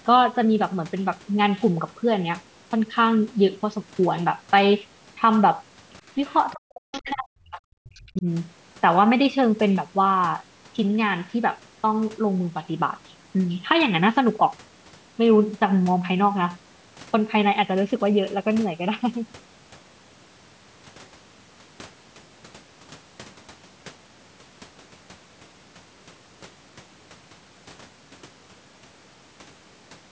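At 6.28 s there's a short scrap of the other side's voice leaking through, very faint, around 30 dB under the talker. It's likely loudspeaker playback that the echo canceller didn't fully remove from the mic. It shows up again at 6.92 s, somewhat louder at roughly 20 dB down, and at 7.86 s, back near 30 dB down.

From 6.54 to 8.26 s the talker's speech is suppressed in double talk. For about a second and a half in total, the voice sinks by as much as 40 dB or so. The likely cause is both sides talking at once, with the canceller unable to separate the talker from the echo and pulling both down.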